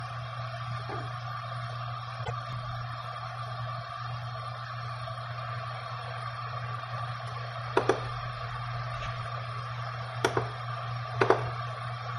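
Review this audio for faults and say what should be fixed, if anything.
At 2.24 to 2.31 s there are repeated frames. A 26.1 ms block of sound plays, then plays again straight away. The effect is a brief stutter. The length of the repeat points to a single compressed frame being written twice. The clip runs 26.1 ms longer than it should. To prevent this, make the writer or sender check sequence positions and drop duplicate frames before they are stored.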